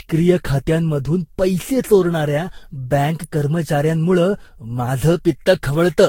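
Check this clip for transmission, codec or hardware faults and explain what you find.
Two faults are present: lossy re-encoding across the whole clip, and a single electrical click near the middle.

Generation loss runs throughout. The speech was likely decoded and re-encoded around seven times, with a sound that points to a Vorbis-type codec near 60 kbit/s. Each pass requantises on a shifted frame grid, so the errors stack. Nothing survives above 16.7 kHz, and the speech sounds swirly, hollow and smeared, with softened consonant attacks.

An electrical switching spike lands at 3.24 s, right after "खात्यांमधून पैसे चोरणाऱ्या बँक". A nearby switch or discharge likely arced, and the audio line picked it up. It is heard as a sharp, brief snap laid on top of the speech.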